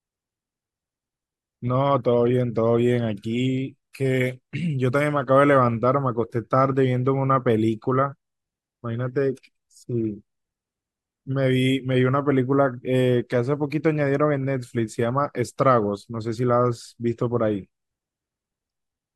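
Nothing in this speech recording stands out as a technical problem at any point.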